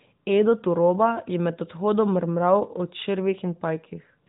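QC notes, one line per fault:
No faults found.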